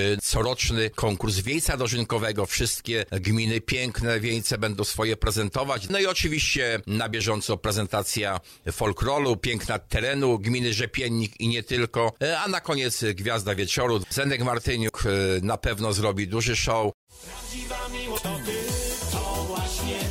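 Three brief faults break through the sound: one at 7.49 s, then others from 14.85 to 14.90 s and from 18.14 to 18.19 s, each lasting only a few tens of milliseconds. They are damaged data in a compressed stream. Bytes in the encoded file were corrupted at those points, so the decoder misread the affected frames and lost sync before locking onto the next valid frame header.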